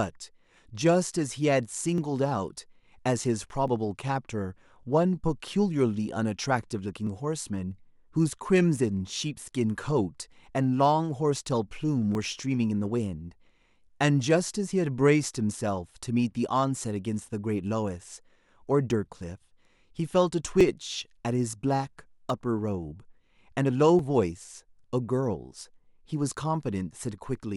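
Speech, with a click every 1.69 s from 0.29 s to 27.38 s, around fifteen of them, likely clock drift buffer slips dropping or repeating a few dozen samples.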